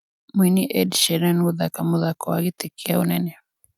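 No technical faults can be heard anywhere in this speech recording. Nothing in it calls for a timed note.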